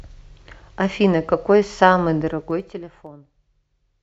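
From about 2.23 s to 3.16 s there's zipper noise on the speech. The level drops by roughly 20 dB, but it's applied in hard 2 dB jumps at around ten a second instead of being ramped smoothly. Every jump puts a tiny discontinuity into the waveform, so you hear a quick run of ticks, a sort of zipping texture riding on the speech, right while the level is falling.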